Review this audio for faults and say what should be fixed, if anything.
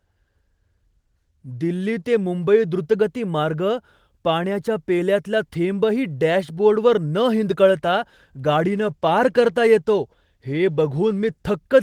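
From 7.78 s to 11.61 s there's a call bitrate drop. The sound goes rougher and watery, and it stays at its worst for almost all of that stretch, about 3.8 s. The bandwidth estimate fell, so the encoder was told to spend far fewer bits and coded the speech more coarsely. The change fits Opus stepping down from around 32 kbps to something like 17 kbps, against the roughly 12 kHz top end the call path carries before the dip. To prevent it, set a sensible minimum bitrate and make sure the link has enough headroom that bandwidth estimation doesn't throttle the encoder.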